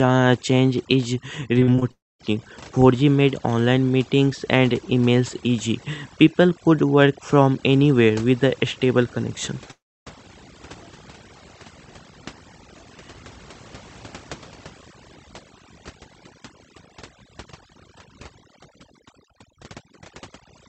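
Overdone noise removal runs through the whole clip. A noise reducer pushed too hard has treated narrow frequency bands close to its noise estimate as removable and pulled them down almost to nothing, taking the softer parts of the speech along. The background sinks to a near-silent floor scattered with twinkling specks, and the speech has its quieter detail eroded.

Repeated packet loss (robotic sound) appears from 1.59 to 1.83 s. Short holes follow one another, the longest about 39 ms, and around two fifths of the stretch is patched by stretching out the preceding sound. The result is choppy, with pieces of the speech missing.

A long network dropout is the likely cause of what follows from 1.91 to 2.21 s. A short continuation of the last sound fades out, leaving roughly 230 ms of silence before the speech returns further on with the lost portion gone. The same thing happens again from 9.71 to 10.08 s, where the fading tail gives way to about 300 ms of silence. 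In both places, the audio that failed to arrive is never played.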